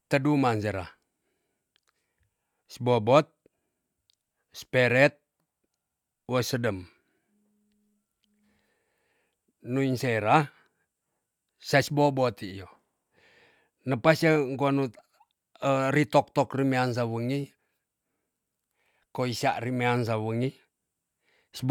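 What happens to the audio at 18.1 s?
Nothing goes wrong at 18.1 s; the speech plays through that moment intact, with no dropout, click, distortion or other fault.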